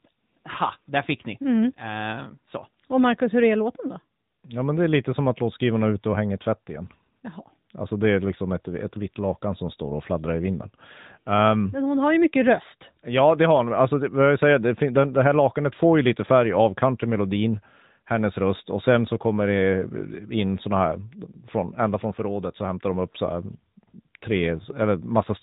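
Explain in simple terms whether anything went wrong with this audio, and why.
From start to finish, the speech has been through the AMR narrowband mobile codec, the phone-network speech coder. It discards everything above about 3.8 kHz, so the voice sounds muffled, and it rebuilds speech from a simplified model, adding a plainly audible buzzy, synthetic edge.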